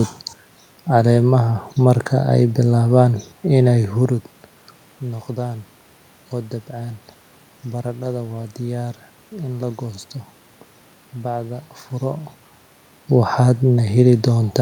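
No technical faults can be heard anywhere in the recording. There is a background of room noise, and the level shifts around 4 s and again near 12 s as the talker moves relative to the microphone.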